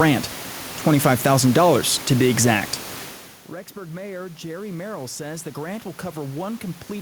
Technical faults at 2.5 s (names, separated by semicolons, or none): none